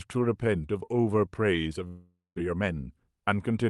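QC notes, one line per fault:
1.87 to 2.40 s, long network dropout: the sound trails off as a fading buzz or hiss, then about 0.18 s of silence; likely a stall in arriving audio, with roughly 0.4 s lost.
2.55 to 3.49 s, jitter buffer speed-up: speech runs about 7% fast at unchanged pitch, sounding hurried, as the receiver trims short pitch-period slices to shed built-up delay.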